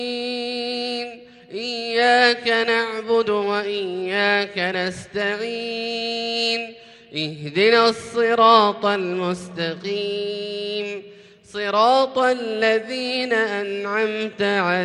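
Nothing stood out as a technical problem on listening to the recording.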